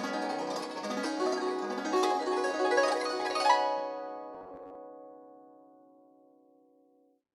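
From 4.34 to 4.76 s the music turns into a rigid, metallic buzz at 93.8 Hz. This is robotic sound from repeated short buffers, likely a 10.7 ms segment looped over about half the passage. A spectrogram shows harmonic lines 94 Hz apart, and the waveform shows identical repeating blocks.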